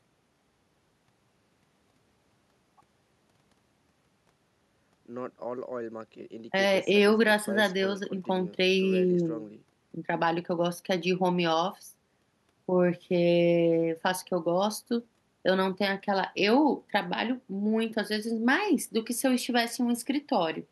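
No technical faults are audible anywhere in the speech recording.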